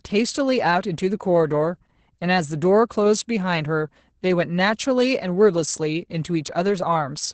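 Opus voice compression runs throughout the speech, with nothing above about 8.7 kHz. The sound points to a wideband SILK linear-prediction coder working near 10 kbps, coding the excitation coarsely, so the speech comes out muffled, hoarse and slightly robotic.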